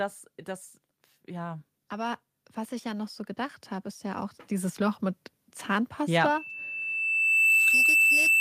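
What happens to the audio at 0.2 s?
Nothing goes wrong at 0.2 s; the speech there is intact, with no dropout, click, distortion or other fault.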